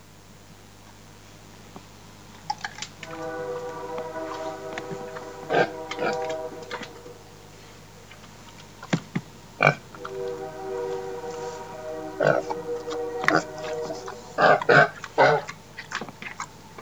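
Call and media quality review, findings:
Mains buzz, full length. Steady raspy 50 Hz buzz, roughly 25 dB under the sound. Likely a dimmer, rectifier or unshielded cable injecting switching spikes twice per cycle, so harmonics climb into the kHz range. Check grounding and shielding.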